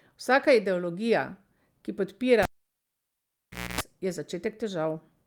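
At 2.43 s the speech is cut by a sharp pop as a live cable is pulled out, and for about 1.33 s only near silence remains. A burst of 60 Hz mains buzz lasting about 0.26 s appears while only the plug tip makes contact, and a second pop at 3.81 s marks the cable being plugged fully back in. On a waveform the pops are tall single spikes around a flat gap. A spectrogram shows vertical broadband lines at each pop, with stacked horizontal harmonics of 60 Hz during the buzz.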